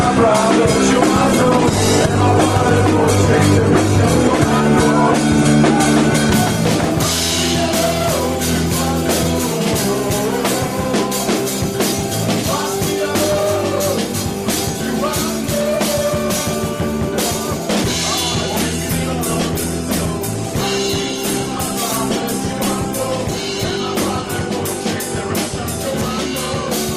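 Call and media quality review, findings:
Call bitrate drop, 1.03–6.95 s. Audio turns coarse and muffled, high end missing, worst for about 1.9 s before recovering. Encoder starved after a bandwidth-estimate fall; sound fits roughly 64 down to 15 kbps.

Call bitrate drop, 18.77–24.41 s. Same rough, band-limited coding, held at its worst for about 5.6 s. Congestion control cut the encoder rate; sound points to about 17 kbps from 64 kbps.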